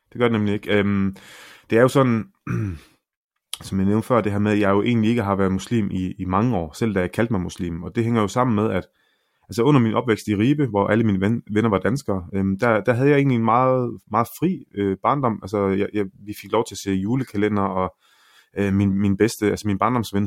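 No technical faults are audible.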